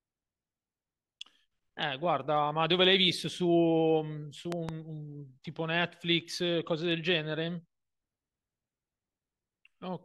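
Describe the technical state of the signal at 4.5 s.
At 4.52 s a loud pop breaks into the speech, lasting until about 4.71 s. It arrives as two sharp pops in quick succession, peaking about 15 dB above the speech. The speech carries on underneath without a gap. The likely cause is a sudden electrical step or pulse, from a plug, a switch or static, entering the signal path. The circuits after it shaped that jolt into the short thumps heard here.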